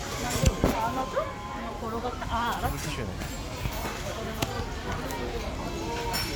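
From 3.08 s to 3.69 s the audio abruptly runs about 6% fast, raising its pitch by roughly 102 cents, just over a semitone, before snapping back to normal. This is a drift correction step, likely from clock-matching software that changed the playback rate in one jump to manage its buffer. On a spectrogram every component steps upward together for that 0.6 s span, then drops back; in the waveform, features appear slightly time-compressed there.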